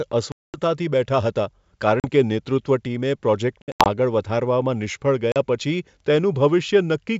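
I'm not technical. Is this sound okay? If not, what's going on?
No. The speech drops into sudden silent gaps at 0.32 to 0.59 s, 2.00 to 2.08 s just after "બેઠા હતા", 3.62 to 3.88 s just before "આગળ વધારવામાં નિષ્ફળ", and 5.32 to 5.43 s just after it. This is packet loss on an ADPCM call: pieces of the audio never arrived and were replaced by silence. The receiving end's decoder then briefly loses track of the sound when the speech resumes.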